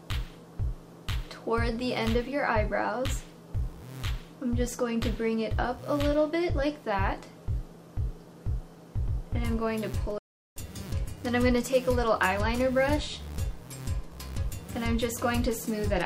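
At 10.18 s the sound cuts to silence for about 0.38 s before resuming at 10.56 s, a playback stall, likely from the player running short of data.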